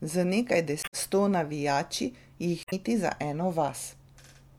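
A speech clip with two bursts from damaged data in a compressed stream, at 0.80 to 0.94 s, just before "sto navijači", and at 2.62 to 2.73 s, right after "sto navijači". Corrupted bytes make the decoder misread frames and hunt for the next valid header, producing a short disruption. On a spectrogram each shows as a break in the harmonic pattern; the waveform shows an abrupt discontinuity there.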